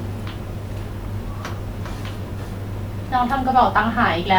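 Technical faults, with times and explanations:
No technical faults are audible in this speech recording.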